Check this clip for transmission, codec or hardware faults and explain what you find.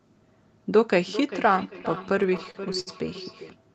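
Two faults are audible, and they overlap in the middle of the clip. Its audio tops out around 8 kHz, which fits an Opus call at about 24 kbps.

Feedback echo between two devices, from 0.95 s to 3.59 s: speech returns as a thin, ringing copy roughly every 0.4 s, peaking at about 13 dB below the speech itself. A second device in the room replays the call, and the first microphone captures it. Its echo canceller only removes its own playback, so the copy passes through.

Repeated stalls (stutter), from 1.81 s to 2.90 s: the speech drags and catches about a dozen times, each hold lasting up to 68 ms. Together they add about 211 ms of stretched sound, roughly a fifth of that stretch, with nothing dropped. Packets arrived late, so the jitter buffer kept emptying and the receiver extended the last sound until more arrived.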